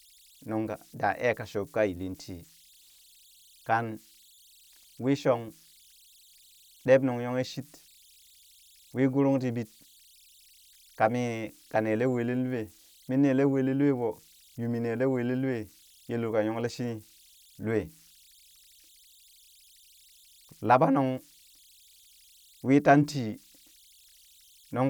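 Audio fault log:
throughout, converter idle tones: a faint whistle around 4 kHz sits about 32 dB below the speech, most exposed in the pauses, with a grainy texture under the quieter passages. An undithered delta-sigma converter given very small input settles into repeating bit patterns, and those cycles produce steady tones whose pitch follows the input's DC offset. Because the pattern locks in rather than randomising, the error comes through as a pitched tone instead of a smooth, steady hiss.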